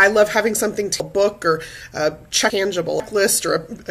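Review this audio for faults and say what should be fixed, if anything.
Chunks out of order from 1.0 to 3.0 s: a 500 ms chunk plays three chunks late, giving a jumbled passage with three hard joins. Reorder chunks by sequence number or timestamp before playback or writing.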